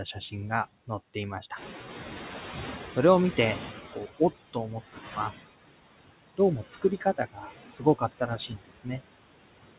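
Noise suppressor artifacts run through the whole clip. The suppressor pulls the background down by about 17 dB, frame by frame. So the noise sinks in the gaps and swells back under the speech. Everything sits below about 4 kHz, which fits a narrowband telephone codec such as G.711.

From 1.56 to 4.03 s the noise suppressor is catching up. The room noise jumps by about 13 dB at around 1.5 s. The suppressor's noise estimate lags behind that jump. The louder noise first comes through with less reduction. It then sinks over about 2.5 s until the cut reaches about 15 dB.

Speech is cut by the noise suppressor five times. The spans are 4.53 to 4.76 s, 4.93 to 5.33 s, 6.7 to 7.52 s, 7.69 to 8.03 s and 8.19 to 9.0 s. The suppressor mistakes parts of the speech for noise and turns them down with the background. The drops reach about 11, 16, 17, 14 and 20 dB. Within each span only part of the speech is affected, from roughly a tenth of a second to under half a second. 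Those parts sound swallowed and faint.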